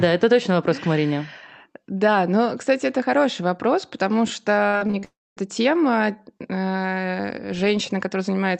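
From 4.67 to 5.05 s the speech turns choppy and robotic, with fragments missing. This is repeated packet loss: five gaps, the longest 59 ms, were patched by extending the previous sound. Straight after, from 5.05 to 5.39 s, a fading buzz gives way to about 240 ms of silence before the speech resumes with a piece gone, likely a long network dropout.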